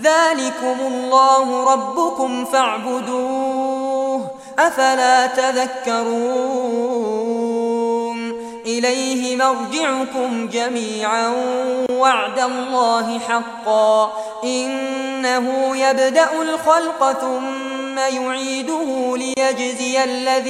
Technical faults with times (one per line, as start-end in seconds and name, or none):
11.86-11.89 gap at a join of encoded pieces
19.34-19.37 gap at a join of encoded pieces